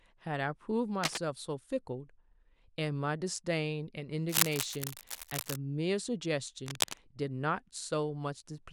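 A worn cable or connector likely shifted, rapidly varying contact resistance: cable scratch noise, uneven scratching about as loud as the speech, at 1.03–1.18 s, 4.29–5.56 s and 6.66–6.97 s.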